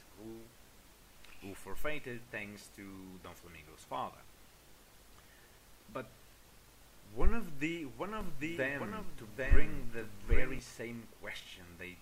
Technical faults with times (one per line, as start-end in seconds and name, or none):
8.21-10.59 doubled audio track